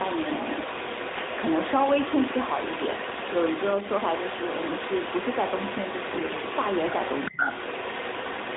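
Speech over a narrowband mobile path, with content topping out below 4 kHz, is shadowed for the whole clip by a delayed copy of itself. This is an echo leak, most likely from a far-end loudspeaker whose echo canceller let its microphone pickup through. The copy trails by 400 ms at roughly 5 dB below the direct speech. On a spectrogram, each syllable's harmonic pattern reappears shifted to the right, and in the waveform each burst of energy carries a smeared tail. AMR bit errors hit twice, briefly from 1.14 to 1.23 s and for about a third of a second from 6.12 to 6.43 s. Corrupted excitation pulses and slightly wrong gain and spectral values make the speech turn hoarse and gargly there while pitch and loudness hold roughly steady. A spectrogram shows the harmonics breaking into ragged, noisy smears within the band, and the waveform turns spiky and irregular rather than dropping out. Between 7.31 and 7.40 s the speech dips by as much as about 10 dB over roughly 70 ms, which is speech suppressed in double talk. 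It is likely the echo canceller ducking the talker while the other side spoke. The waveform shows a short notch in the envelope, and the spectrogram a brief vertical fade.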